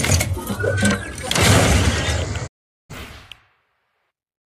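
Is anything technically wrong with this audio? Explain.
Yes. From 2.46 to 2.92 s there is a digital broadcast dropout. The receiver stopped getting usable frames, either because the signal was lost or because the frames failed their checks, so it muted the output until valid data came back. The sound fades to silence over about 20 ms and returns after roughly half a second. The missing stretch, about 416 ms, fits around a dozen lost frames, and whatever was sent in that gap is gone. On a waveform this shows as a short taper into a flat line. On a spectrogram it shows as a blank vertical band across all frequencies.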